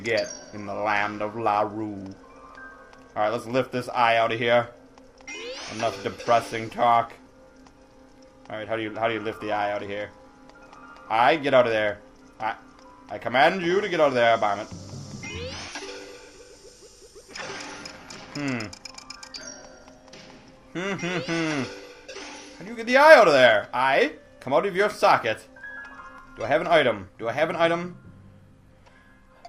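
No technical faults can be heard anywhere in this audio. Nothing in the sound points to a problem in how it was captured or passed along.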